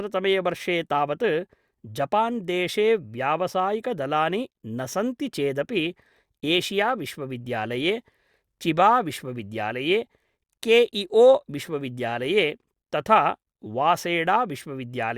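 No faults are audible anywhere in the recording; level, timing and continuity hold steady throughout.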